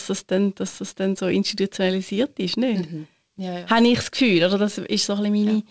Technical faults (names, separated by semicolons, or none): none